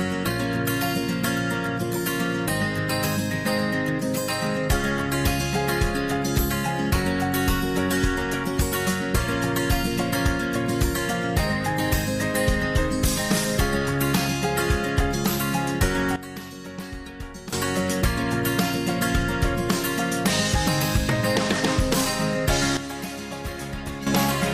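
A sudden gain jump occurs from 16.16 to 17.53 s, where the level drops by about 13 dB, and again from 22.77 to 24.07 s, down about 10 dB. Sound and background noise fall together instantly, likely from a gain change applied without a ramp.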